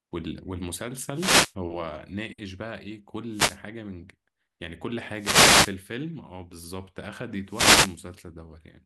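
Wireless microphone noise hits at 1.13–1.54, 3.31–3.61, 5.15–5.78 and 7.44–8.01 s: radio fades raise receiver hiss into brief static swishes, unlike steady broadband noise.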